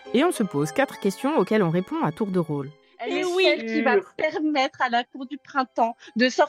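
From 0.89 to 2.64 s the sound runs about 6.3% fast and sits roughly 106 cents sharp, a semitone up, then snaps back to normal. This is likely a drift correction step, where clock-matching software abruptly altered playback rate to rebalance its buffer.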